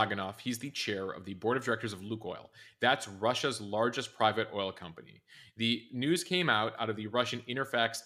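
A speech recording with nothing technically wrong with it.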